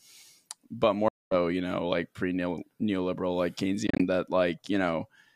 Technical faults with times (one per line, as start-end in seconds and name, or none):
1.08-1.35 Bluetooth dropout
3.87-4.04 Bluetooth dropout